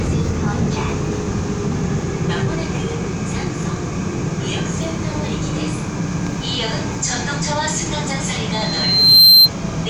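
From 8.52 s to 9.50 s a loudspeaker feedback squeal takes over. A single tone near 4.1 kHz swells from nothing over most of a second and ends roughly 15 dB above the sound. A microphone is picking up the loudspeaker it feeds, and at that frequency the loop gain has passed one, so the tone keeps feeding itself. A steady interference whine would sit at a fixed level. This tone grows by itself.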